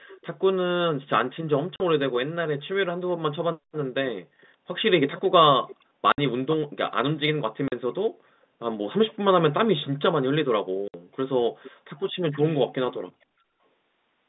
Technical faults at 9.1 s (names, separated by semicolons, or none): echo leak